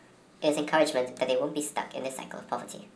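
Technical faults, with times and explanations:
Throughout, wrong sample rate: the speech runs about 1.38 times fast and about 5.5 semitones high, which fits 16 kHz audio played back at 22 kHz without conversion.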